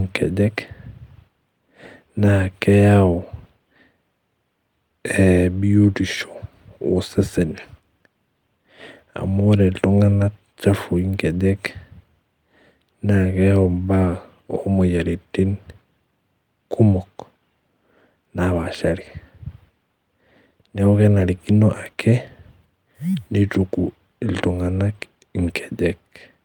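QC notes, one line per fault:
Nothing to flag on this speech clip; I heard no faults anywhere in it.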